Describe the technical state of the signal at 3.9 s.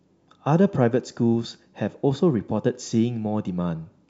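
At 3.9 s the audio is intact, with no audible fault.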